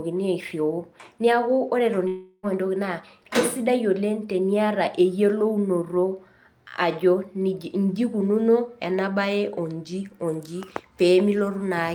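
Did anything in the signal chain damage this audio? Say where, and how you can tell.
Yes. From 2.07 to 2.46 s the speech breaks off. The last sound is stretched into a fading buzz, then silence, and the speech resumes with about 360 ms gone. That points to the network stage, most likely a long network dropout concealed by the receiver.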